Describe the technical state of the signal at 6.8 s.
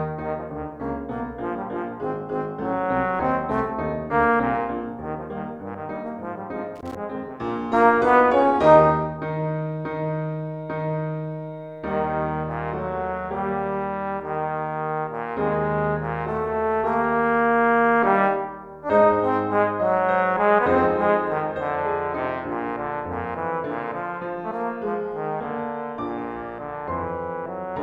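Loose connector crackle runs from 6.76 to 6.95 s: a worn or dirty contact is making and breaking, chopping the signal into an irregular scratchy burst. The waveform shows jagged dropouts and spikes, and the spectrogram shows broadband vertical streaks scattered across that fifth of a second.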